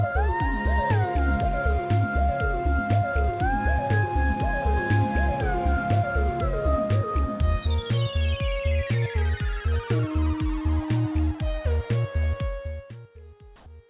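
A DECT cordless phone buzz runs through the whole clip: a thin, steady 100 Hz buzz dense with harmonics, at about 30 dB below the signal. A nearby handset or base emitting radio bursts every 10 ms is being rectified by the audio circuitry, and the harmonics stay audible even within the band-limited call audio, which has nothing above 4 kHz.

From 12.41 to 13.11 s there is zipper noise while the level falls by roughly 20 dB. The gain moves in discrete, unsmoothed steps at around a hundred per second. Each step leaves a small click, and together they form a fine ticking that sits on top of the fade.

From 13.56 to 13.66 s the background is replaced with comfort noise for 100 ms. The real ambience gives way to a flat, featureless hiss with a level shift of about 5 dB. The likely cause is discontinuous transmission, with the receiver synthesising noise during a detected pause.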